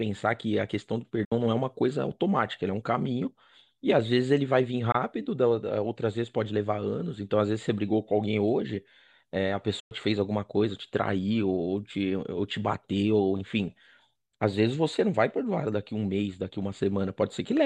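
At 1.25 s the speech cuts out for about 64 ms, again at 4.92 s for about 21 ms, and at 9.80 s for about 107 ms. Each is a Bluetooth dropout, likely caused by packets arriving too late at the headphones and being discarded. The output falls silent, and the sound then resumes as though it had kept playing, with the missing audio skipped rather than delayed. A waveform shows flat gaps. On a spectrogram they appear as clean vertical blank strips across all frequencies.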